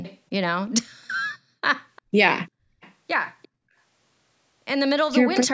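Short echo-leak scraps at 0.03, 0.66, 1.96, 2.81 and 3.42 s give faint copies of the speech 348 ms late, likely a loudspeaker echo slipping past the canceller.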